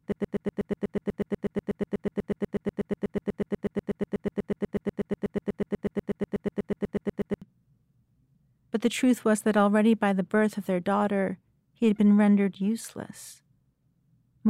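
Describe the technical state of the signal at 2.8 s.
At 2.8 s the signal is inside a broken-record loop that is already running when the clip opens and lasts until about 7.42 s. A fragment of roughly 0.12 s of speech repeats exactly, back to back, about 60 times, giving a rapid stutter with no forward progress. The likely cause is a stalled player, encoder or stream resending its last held fragment, so the audio that belonged to this stretch is lost.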